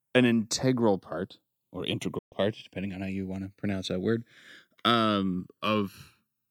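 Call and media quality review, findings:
Slow flanging across the whole speech clip when summed to mono, comb notches sweeping gradually. Channels drifting apart: left and right captured on separately clocked devices, mismatch around 100 ppm, inter-channel delay creeping to under a millisecond by the end.

Speech cuts out 2.18 to 2.33 s, fading to silence over 8 ms, then resumes with a gap in content. Digital broadcast dropout: receiver lost signal or frames failed checksum and muted. 128 ms lost, which fits four 32 ms frames.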